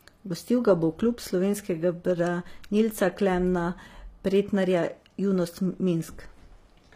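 From start to finish the speech carries plainly audible codec damage, likely from HE-AAC compression. Nothing sits above 15.5 kHz, yet the treble below that is still present. It is rebuilt rather than original, so s sounds come out gritty and metallic, with upper harmonics that don't line up with the body of the voice. That synthetic brightness sets it apart from a simple low-pass cut, and the damage fits a low bitrate around 24 kbps.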